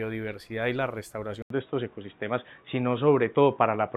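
At 1.42 s the audio drops out for about 80 ms, then returns with a different character through to the end. Nothing is present above 3.8 kHz, so the sound turns dull and boxy, the overall level shifts by roughly 5 dB, and a new background noise floor appears, sitting around 45 dB below the signal. This pattern points to an input switched to a poorer device, likely a change of microphone or a headset's call profile mid-recording.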